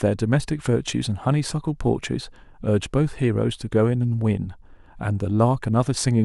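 No technical faults can be heard anywhere here.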